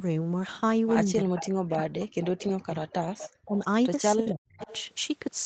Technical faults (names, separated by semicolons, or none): speech suppressed in double talk; echo leak